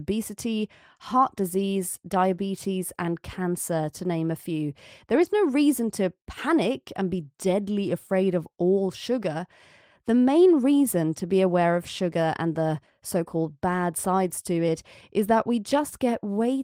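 A lost packet rebuilt from error correction occurs between 5.11 and 5.25 s, just after "to name a few" and before "no reason to panic". Packets went missing, and the decoder filled the hole with low-bitrate backup copies carried inside the packets that followed, so the sound never drops out. About 80 ms is rebuilt this way, consistent with roughly four lost packets, and that stretch sounds coarser and noisier than the speech around it.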